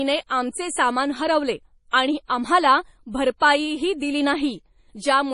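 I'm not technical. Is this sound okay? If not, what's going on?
No. Throughout the speech, from start to finish, the sound is watery and swirly, s sounds turn metallic and chirpy, and nothing is heard above about 10.6 kHz, so the top feels sliced off. This is likely heavy MP3 compression: the file was squeezed so hard that quiet details flicker in and out. What sets it apart from a simply muffled microphone is that swirling, bubbling quality, not just a dull tone.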